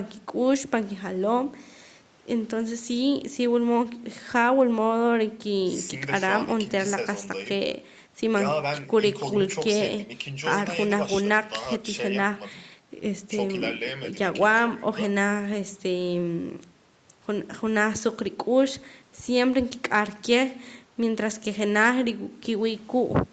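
Listening to this speech recording, nothing stood out as a technical problem.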